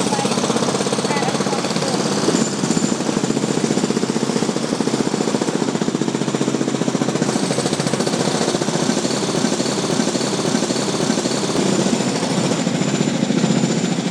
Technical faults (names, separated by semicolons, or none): broken-record loop